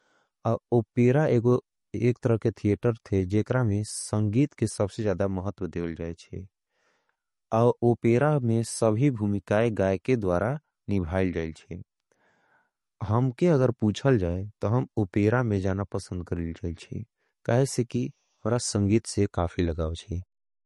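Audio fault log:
throughout, MP3 compression: nothing above 11.6 kHz, watery swirling texture, likely from a low bitrate near 40 kbps; a simple low-pass filter wouldn't warble.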